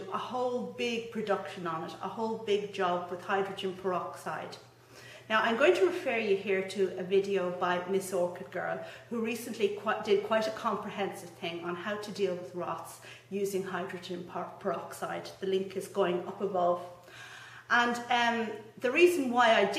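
Nothing stood out as a technical fault on listening to this clip.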